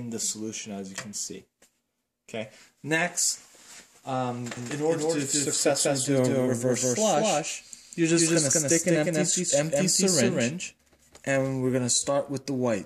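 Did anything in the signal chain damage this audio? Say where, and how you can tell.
Yes. A doubled audio track runs from 4.57 to 11.37 s, likely from a second, slower capture path or a misaligned edit. A full-band copy at roughly equal level trails about a fifth of a second behind, with no decay, and cuts in and out abruptly.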